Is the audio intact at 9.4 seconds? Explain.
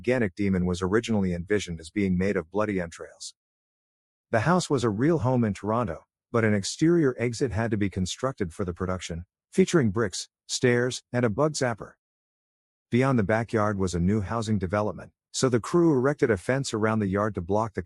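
Yes, the audio is intact at 9.4 seconds, with no dropout, click, distortion or other fault at that moment.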